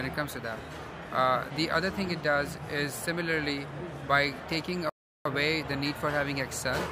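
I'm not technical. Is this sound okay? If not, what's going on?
No. At 4.89 s the sound cuts to silence for about a third of a second, then picks up again at 5.25 s. This is a playback stall: the player likely ran short of audio data or got briefly held up, so output paused until it caught up.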